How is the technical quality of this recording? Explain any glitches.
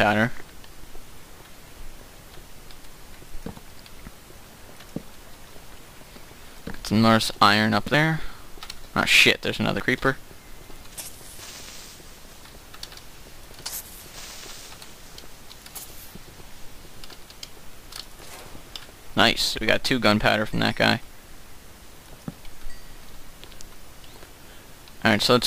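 The recording has three abrupt skips, at 0.84 s, 7.94 s and 9.80 s. Each is a sudden jump in the sound, most likely a dropped buffer (overrun): the software failed to read its input before the hardware overwrote it, so roughly 50 ms of audio vanished and the surrounding material was spliced end to end. Unlike a dropout, there is no gap of silence. The sound simply lurches forward past the missing slice.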